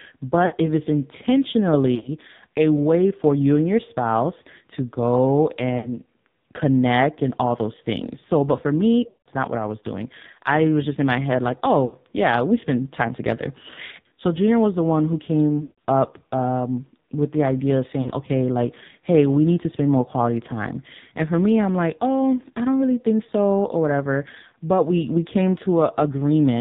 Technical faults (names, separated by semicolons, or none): AMR narrowband mobile codec; lost AMR speech frames